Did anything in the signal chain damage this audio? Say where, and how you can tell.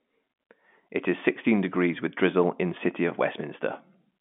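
No, nothing in the chain has damaged this speech. What you hear is the narrow band of G.711 telephone coding, with the line passing 200 Hz to 3.5 kHz and nothing above 3.7 kHz, which is simply how that telephone path sounds when it is working.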